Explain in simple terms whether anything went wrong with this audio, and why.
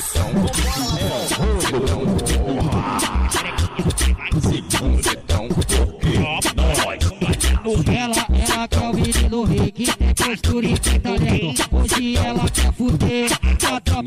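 Nothing went wrong here: the recording has no technical fault anywhere in it.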